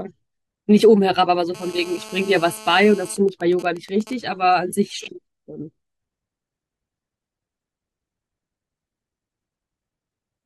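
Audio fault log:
1.55–3.12 s, GSM phone buzz: a nearby 2G handset in a call transmits bursts at 216.7 Hz, and the audio circuit rectifies the radio pulses, laying a hard, raspy 217 Hz buzz rich in harmonics under the speech at about 20 dB below it, unrelated to what is said.
3.12–4.13 s, GSM signalling bursts: the handset's user falls silent in the call, so it sends only short groups of bursts, still at the 217 Hz rate; rectified, these become even ticks with a longer buzz twice a second, roughly 20 dB below the speech.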